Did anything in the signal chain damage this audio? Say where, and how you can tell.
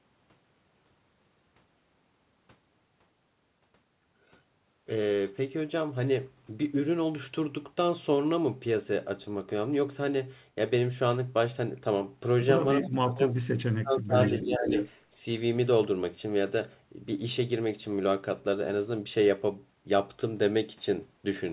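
Yes. Speech suppressed in double talk at 12.8–13.34 s and 13.78–14.7 s: the speech drops sharply, around 25 dB, likely because call processing ducked the near talker along with the loudspeaker echo.

Echo leak at 14.23–14.45 s and 14.68–14.89 s: a copy trails the speech by 428 ms at about 10 dB, then about 5 dB, down, likely loudspeaker pickup the canceller missed.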